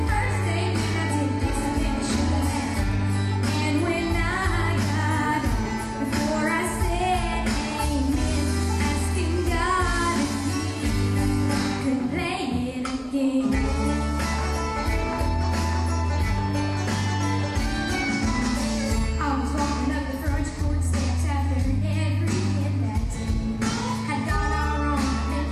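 No technical faults can be heard anywhere in the clip.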